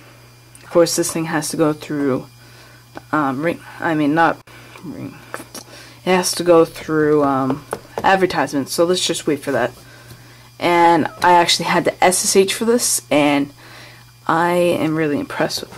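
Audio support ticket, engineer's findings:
Loose connector crackle, 4.41–4.49 s. Short irregular burst of crackle and scratching, roughly 80 ms, single occurrence. Probable component: worn or dirty contact in a cable plug or jack. Mechanism: contact shifts under movement and makes and breaks repeatedly within that window, chopping the signal on and off and producing the ragged scratchy texture. Reseat or clean the connector, then check the cable.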